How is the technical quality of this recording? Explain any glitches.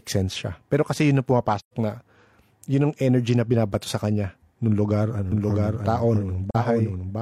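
The recording has two kinds of glitch: brief dropouts in the middle and near the end, and a duplicated copy of the speech over the last couple of seconds.

From 1.59 to 1.74 s and again from 6.50 to 6.56 s there is AAC frame loss with muting. The decoder zeroed the spectrum of the missing frames, and the overlapping windows faded the sound out and back in. This leaves soft-edged holes of 128 ms (about three frames) and 43 ms (one frame). On a spectrogram each appears as a full-band vertical gap with tapered edges.

From 5.32 s to the end there is a doubled audio track. A second, equally loud copy of the speech trails the original by roughly 0.7 s, likely from a slower second capture path or an edit holding misaligned copies. It starts abruptly and is a dry repeat with no reverb tail. A spectrogram shows the harmonic patterns repeated 0.7 s later.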